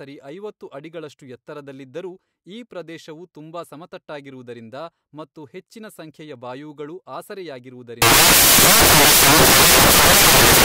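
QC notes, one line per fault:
8.02–10.65 s, samples built from the wrong bytes: from 8.02 s to the end the speech turns into loud, harsh broadband noise, close to white on the louder sounds. Each sample is assembled with its bytes misordered or misaligned, so the rapidly fluctuating low-order bits land in the high-order position and dominate the signal.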